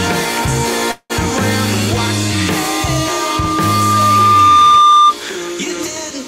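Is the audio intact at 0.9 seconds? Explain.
No. From 0.91 to 1.12 s the sound stalls into a fading buzz that fills about 184 ms, ending in about 40 ms of silence, before resuming where it stopped. This is a call audio freeze, likely from delayed packets emptying the jitter buffer. Nothing is lost, but everything afterwards runs about 184 ms late.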